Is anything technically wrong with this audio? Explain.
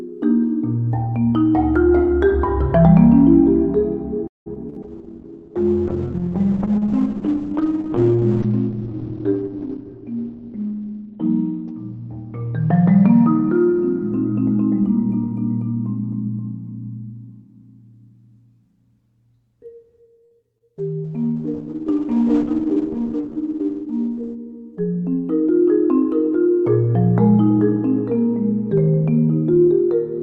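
Yes. The audio has several network and transport faults.

From 4.27 to 4.78 s there is repeated packet loss, which gives a robotic sound. Four gaps open in quick succession. The longest lasts 186 ms. The receiver patches each hole by extending the last sound, and about half of this stretch is filled that way. Around 60 ms of real audio is lost outright. The result is choppy and mechanical, with pieces missing.

A call bitrate drop follows from 4.83 to 15.41 s. The bandwidth estimate fell, so the encoder went from 48 kbps down to 8 kbps. It stays at that floor for about 6 s. At such a low rate the coding is coarse, and the top end is cut from 20 kHz to 4 kHz. The sound turns muffled and rough. A second drop runs from 20.80 to 25.41 s, from 48 down to 12 kbps. It sits at the lowest rate for about 3 s, with the bandwidth cut to 8 kHz. This one is muffled too, but less severely.

There are two jitter buffer speed-ups. 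From 9.68 to 10.88 s the receiver held too much audio. It trimmed short pitch-period pieces again and again to reduce the delay, roughly 150 ms in total. The sound runs at 113% speed at unchanged pitch, so it feels hurried. From 22.63 to 23.29 s the same happens at 109%, with roughly 70 ms removed.

At 20.25 to 20.33 s there is a short stall from a late packet. The buffer ran empty, and the last sound was stretched for 58 ms until the packet arrived. Nothing is lost. The sound is held too long, with a faint buzz or dip.

Just after, from 20.58 to 20.62 s, there is a short concealed packet loss. About 20 ms never arrived in time. A 23 ms synthetic continuation bridges the gap and blends back into the real audio. It is heard as a brief smear or wobble.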